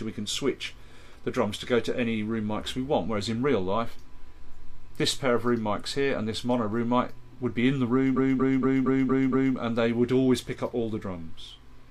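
From 8.13 s to 9.52 s the audio stutters with repeated frames. One 232.2 ms block, which fits a run of about five compressed frames, plays six extra times and adds 1.39 s. Unlike a dropout, nothing goes missing. The same slice returns identically and the clip runs longer.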